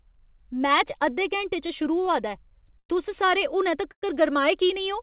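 At 2.79 s the speech stops for about 0.13 s. A brief buzzy continuation of the last sound fades out, then about 70 ms of silence follows before the speech resumes. This is a call audio freeze, likely caused by packets arriving late and the jitter buffer running dry. Nothing is lost. The speech simply picks up later. It happens again at 3.91 s, right after "सारे हुनै", for about 0.14 s with roughly 80 ms of silence. The G.711 call path keeps everything below 4 kHz.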